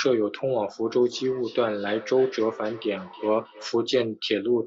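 From 1.02 to 3.82 s, a feedback echo between two devices returns the speech about every third of a second, about 20 dB down. Its fixed spacing and thin, ringing tone set it apart from room reverberation.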